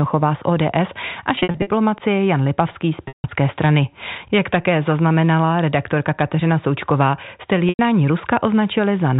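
Speech over a telephone-band line, where the sound three times holds a brief repeated tone that fades into silence: broken up from 1.35 to 1.67 s, then 3.08 to 3.24 s and 7.69 to 7.79 s. This is packet loss with pitch repetition, where the receiver loops the last pitch period to cover the missing audio.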